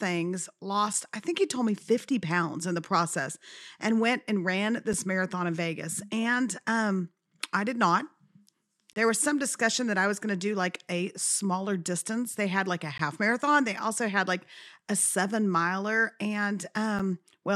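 Short hard-edged dropouts to silence cut into the sound at 0.93, 4.93, 8.93 to 8.96, 12.98 and 16.99 seconds, recurring every 4 seconds. Most last 6 to 15 ms, while the one near 9 seconds stretches to 30 ms. These are gaps between stream segments: the timestamps of consecutive 4-second segments fail to meet, and the player fills each gap with silence. Nothing is lost, but the timeline is stretched slightly at each segment boundary.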